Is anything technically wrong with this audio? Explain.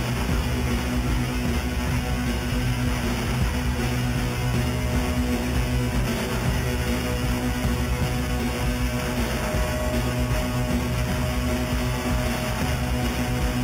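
Yes. Throughout, there is imaging from sample-and-hold upsampling. The audio went from 8 kHz to 48 kHz by repeating samples unfiltered, mirroring the spectrum about 17 dB down, first at 4–8 kHz, as a metallic fizz following the level. Spectrograms show reflected copies above 4 kHz; waveforms look stair-stepped.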